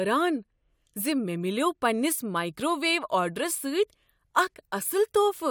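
No technical faults are audible anywhere in the speech.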